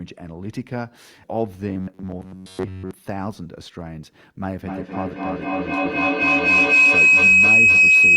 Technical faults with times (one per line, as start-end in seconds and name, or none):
1.69-2.91 robotic sound from repeated short buffers
4.62-8.17 feedback howl